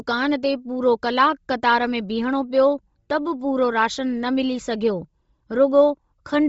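Throughout, the speech is breathy and grainy with nothing above 7.7 kHz, the likely result of heavy Bluetooth LC3 compression at a rate fitting about 24 kbps.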